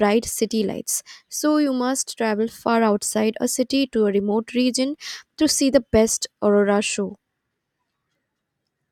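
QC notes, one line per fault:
No faults heard in this speech recording.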